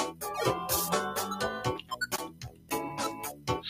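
A noise suppressor applied to music or sounds is active throughout this clip, with its gain swinging by around 15 dB. Built for speech, it treats steady, sustained material as noise and pulls it down, while sudden onsets pass more freely, so the level rises and sinks with the content. Sound cut by the noise suppressor occurs from 1.81 to 2.71 s, with roughly 0.7 s affected and the deepest drop about 14 dB, and again from 3.32 to 3.48 s, dipping about 12 dB, as the processor pushes that material below the surrounding level.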